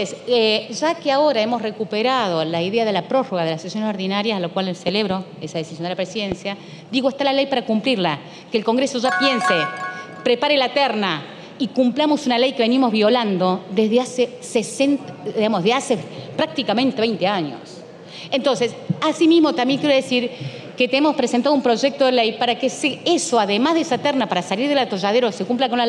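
At 4.88 to 5.13 s there is a loud pop, heard as two sharp pops in quick succession. Another loud pop hits at 6.32 to 6.34 s. Each jumps well above the sound, which carries on underneath. A voltage spike is the likely cause.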